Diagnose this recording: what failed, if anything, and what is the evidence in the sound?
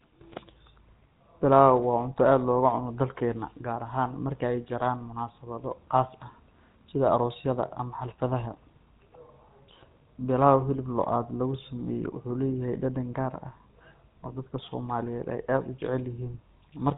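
The codec stage failed. The whole clip, all of it speech, carries plainly audible GSM full-rate codec damage. Nothing above 4 kHz survives, so the top end sounds cut off and dull. Voiced sounds have a buzzy, gravelly roughness. That comes from how the codec rebuilds speech. It models the vocal tract and excites it with evenly spaced pulses, keeping only one excitation sample in three. The result fits GSM full rate at about 13 kbps.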